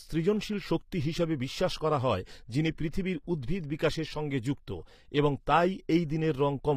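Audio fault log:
throughout, HE-AAC compression: The treble of this speech sounds bright but synthetic, with s sounds coming out gritty, lispy and metallic, most likely from HE-AAC coding at a rate that fits about 24 kbps. Only the lower spectrum is carried faithfully. The top end is regenerated by spectral band replication, which copies lower bands upward under a coarse envelope, so the rebuilt harmonics fail to line up with the real ones and the damage is plainly audible.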